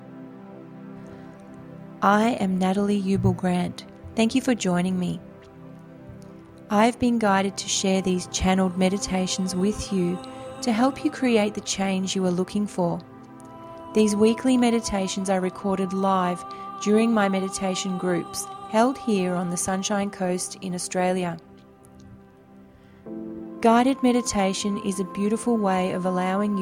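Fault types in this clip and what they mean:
Resampler restarted on every block: the rate converter, apparently going from 48 kHz to 44.1 kHz, was reset at each 20 ms block instead of carrying its filter history across boundaries. Each block edge was therefore computed from missing or wrong neighbouring samples, leaving a small discontinuity there. With blocks this short, the errors repeat at 50 Hz and fuse into a low buzz that sits under the sound throughout the clip, present whenever there is signal.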